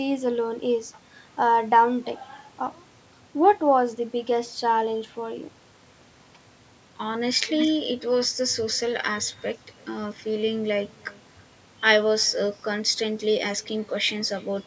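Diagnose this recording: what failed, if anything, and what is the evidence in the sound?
Echo with no canceller at the far end, all the way through: a faint, thin copy of the speech trails each phrase by about a third of a second, about 28 dB down.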